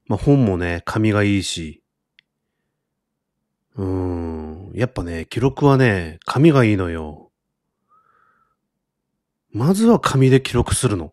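At 5.23 s a tiny skip breaks the speech. It's an overlap between stream segments: a few milliseconds were trimmed where 6-second segments joined, so the waveform jumps.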